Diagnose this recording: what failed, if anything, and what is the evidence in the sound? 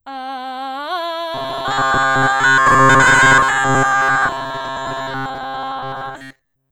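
The failure sits at the driver or buffer stage: robotic sound from repeated short buffers runs from 1.34 s to the end of the music. A rigid, metallic buzz at 134 Hz is imposed on the playing, which fits a block of about 7.5 ms being looped. The likely cause is audio arriving too seldom, so most of the time the last block is replayed while new material is skipped. Unlike codec warbling, the buzz pitch stays fixed regardless of the music.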